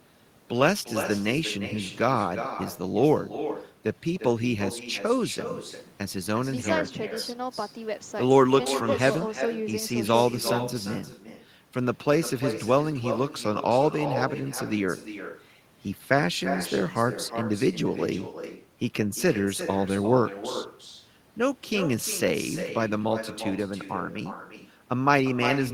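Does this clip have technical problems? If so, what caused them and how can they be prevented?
Yes: echo with no canceller runs throughout the speech. A far-end loudspeaker feeds the microphone, returning each phrase roughly 0.4 s later at about 10 dB down, a quieter delayed duplicate trailing every burst on the waveform and spectrogram. Enabling acoustic echo cancellation, or using headphones at the far end, prevents it.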